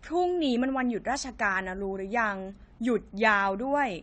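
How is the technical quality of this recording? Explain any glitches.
The recording has clearly audible coding damage throughout. AAC compression, across the whole clip: the encoder, likely AAC-LC at a low rate around 32 kbps, discards fine spectral detail, leaving dull, smeared speech with nothing above 9 kHz.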